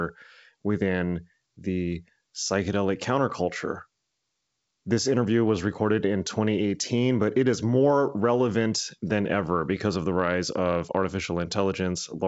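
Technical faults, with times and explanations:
No faults turn up here, just speech carried over a wideband telephone link whose top end gives out around 7.7 kHz, which fits G.722 running at its full 64 kbit/s rate.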